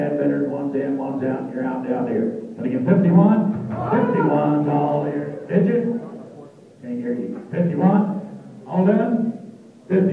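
Nothing is technically wrong with this audio clip.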